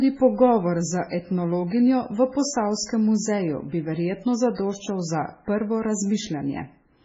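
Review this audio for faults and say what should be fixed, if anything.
Throughout the speech there is nothing above 7.7 kHz, and the remaining band has a heavy watery, swirling quality, with sibilants turning metallic and consonant onsets smeared. This is most likely MP3 compression at a very low bitrate, around 16 kbps. Starved of bits, the encoder imposes a fixed treble cut and drops weaker spectral lines, which then flicker on and off between frames and produce the warble. To prevent it, keep an uncompressed or high-bitrate master and encode from that source at 128 kbps or more.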